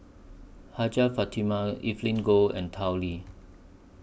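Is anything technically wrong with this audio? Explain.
No, nothing technically wrong turns up anywhere in this bit of speech.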